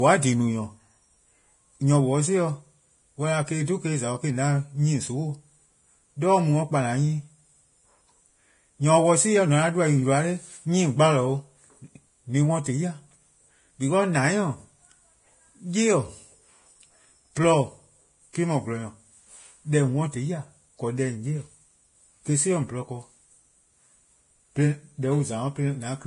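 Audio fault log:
Throughout: Vorbis compression. The speech is grainy and hissy, with nothing above 10.6 kHz, and consonant attacks are smeared. This is likely heavy Vorbis coding at a low bitrate, around 30 kb/s, which drops the treble and quantises the upper band so coarsely that its detail becomes noise. A plain low-pass filter would leave the remaining treble clean and dull; here it is rough and noisy right up to the cut-off.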